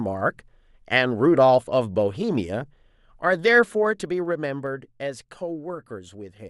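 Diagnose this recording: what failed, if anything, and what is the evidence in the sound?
A gain change in the processing chain was applied in unsmoothed steps, producing zipper noise from 3.54 to 4.93 s. The speech level drops by roughly 10 dB in 2 dB jumps, about five per second, and each jump leaves a small click, heard as a ticking zip over the fade.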